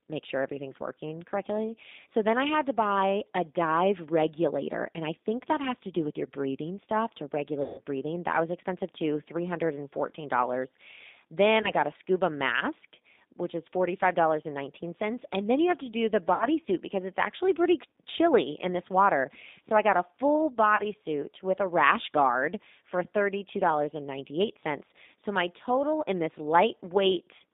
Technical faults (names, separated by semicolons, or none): G.729 codec; VoIP packet loss concealed by the speech codec